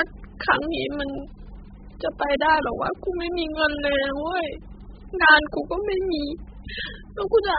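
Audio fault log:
throughout AAC compression: the speech was likely encoded with AAC-LC at a very low bitrate, around 8 kbps. Nothing survives above 5 kHz, and coarse quantisation of what remains leaves the sound dull, heavily smeared, and warbly and fizzy on sibilants.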